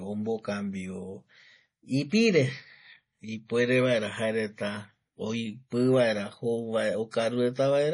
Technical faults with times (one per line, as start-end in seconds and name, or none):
0.00-7.93 MP3 compression
7.11-7.13 pre-echo